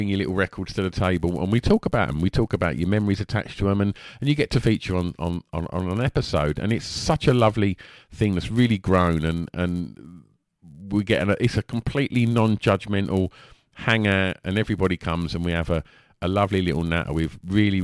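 From start to finish the speech carries a buzz at 100 Hz, the mark of a resampler restarted on every block. The 48 kHz to 24 kHz conversion was run on 10 ms blocks in isolation, so each block edge lacks its true neighbouring samples and picks up a small error. On a waveform these show as tiny discontinuities every 10 ms; a spectrogram shows a 100 Hz comb of harmonics, present only while speech sounds.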